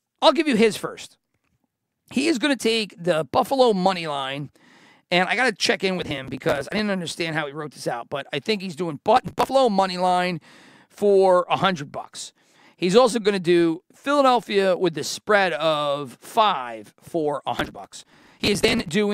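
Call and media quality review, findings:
Processor overload crackle, speech. Gritty tearing bursts at 5.99–6.79 s (after "got to check in", before "understand how he wrote"), 9.17–9.50 s (after "I think he's doing", before "money line for a"), and 17.58–18.89 s (after "of five for a"). Audio processing missing deadlines repeatedly; short pieces skipped outright with hard edges. Rapid grain fits buffers of roughly 5 ms, dozens missed per burst, most in the last one.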